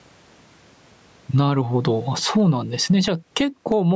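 Gain pumping runs through the whole speech clip: the gain ducks by roughly 15 dB under every loud syllable, leaving the level squashed. The likely cause is input gain set far too high, with a fast limiter clamping it back down.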